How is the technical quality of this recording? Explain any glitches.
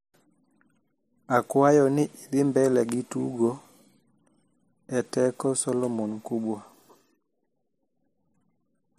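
There's one glitch worth flagging: a loud pop from 2.89 to 2.91 s, a single sharp click sitting a few dB above the speech, which carries on underneath. It's likely a voltage spike, say from a switch, static or a driver hiccup, getting into the signal chain.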